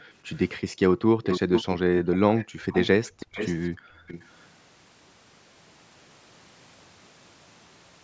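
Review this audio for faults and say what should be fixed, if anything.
Background gated by the echo canceller at 0.0–0.11 s, 0.64–1.16 s, 2.05–2.7 s and 3.76–4.07 s: suppression during loudspeaker playback drops the room sound by about 27 to 40 dB, appearing as near-silent blank gaps in the spectrogram's noise floor. Preventing this means tuning the canceller's suppressor to duck less aggressively, or adding comfort noise to fill those gaps.

Echo leak at 1.23–1.76 s, 2.13–3.67 s and 4.07–4.31 s: a delayed copy of the speech arrives 430 ms late, fading from nearly as loud as the speech to much quieter. It likely comes from loudspeaker sound that the far end's canceller didn't fully remove, and it shows up as smeared, repeated harmonic patterns offset in time. Preventing this means giving the far-end canceller a longer tail and a proper reference signal, or having that side use a headset.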